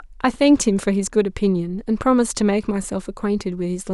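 No technical faults are audible.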